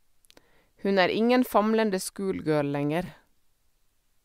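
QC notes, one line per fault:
3.06–3.08 s, chunks out of order: two 10 ms chunks of the speech play swapped, the late one landing one chunk after its proper place. Nothing is missing, but the reversed sequence creates three hard joins, heard as a brief jumbled blip.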